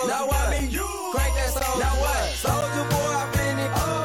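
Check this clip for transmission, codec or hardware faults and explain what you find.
One fault type appears, repeating three times. Gaps between stream segments occur at 0.59, 1.60 and 2.61 s, about one second apart, matching 1.0 s segments. Where adjacent segments' timestamps fail to meet, the player inserts silence: hard-edged dropouts of roughly 4, 14 and 12 ms, with no sound actually missing.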